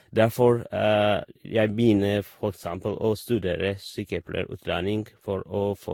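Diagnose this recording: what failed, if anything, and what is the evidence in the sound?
Codec stage, throughout: swirly, hollow speech with smeared attacks and nothing above 17.8 kHz, more damaged than one encode explains, likely generation loss from around seven lossy passes.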